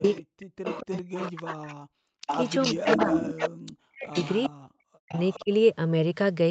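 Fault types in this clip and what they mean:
Speech suppressed in double talk: the speech dips by up to about 40 dB, in pieces totalling roughly a second and a half within both 0 to 1.93 s and 2.73 to 5.52 s, likely because the echo canceller turned the talker down while the far side spoke. Waveform: sudden envelope holes. Spectrogram: vertical gaps across all bands.
Echo leak: a fainter copy of the speech returns 412 ms later, likely loudspeaker sound the echo canceller failed to remove. It is strongest at 2.27 to 3.51 s, only a few dB below the speech, and weaker at 0.03 to 1.72, 4.11 to 4.48 and 5.12 to 5.43 s. Spectrogram: harmonic patterns repeated 412 ms to the right.
Background gated by the echo canceller: at 2.21 to 2.27 s the room sound is pushed down by about 40 dB for roughly 70 ms while the loudspeaker plays, then comes straight back. Waveform: a brief flat notch in the noise floor. 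Spectrogram: a short dark vertical stripe.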